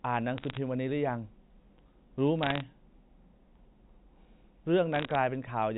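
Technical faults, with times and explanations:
0.38–0.57 s, 2.43–2.61 s and 4.95–5.15 s: bit errors on a digital phone line. Three short bursts of crackle sit over the speech. In each, a fraction of a percent of bits are flipped in the G.711 A-law stream. Each flip changes one sample. When the sign or a high bit is struck, that sample jumps far off and a sharp tick results. Clustered ticks form the crackle. The speech between the ticks keeps its narrow telephone band.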